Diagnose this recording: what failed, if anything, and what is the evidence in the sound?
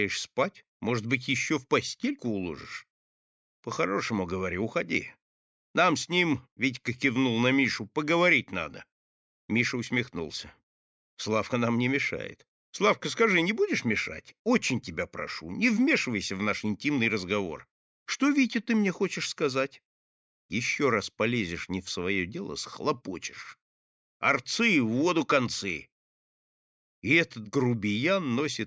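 Nothing failed; the speech shows no audible fault.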